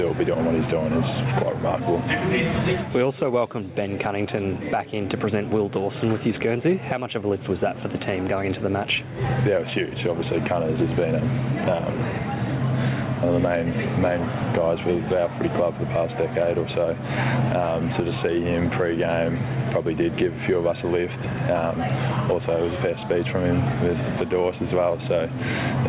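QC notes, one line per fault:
throughout, gain pumping: the gain dips roughly 10 dB under loud sounds, likely a fast limiter clamping down on gain set far too high.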